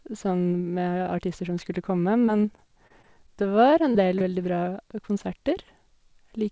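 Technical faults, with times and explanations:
2.26–3.43 s, repeated packet loss (robotic sound): Over this stretch the stream keeps dropping out in six short holes, about 100 ms missing in total and none longer than 25 ms, which is roughly a tenth of the span. Each hole gets patched by stretching the last bit of sound forward, and then the next one arrives soon after. That stacking of synthetic fill is what makes the passage choppy, with small pieces missing.
3.92–3.96 s and 4.18–4.22 s, short concealed packet loss: Two more isolated dropouts, each about 20 ms of audio that didn't reach the decoder in time. The receiver fills each one by carrying on the previous sound, using its pitch where it was voiced and shaped noise where it wasn't, then crossfades back into the real signal. You hear each one as a quick smear or wobble, all within a band that tops out at 8 kHz from the call codec.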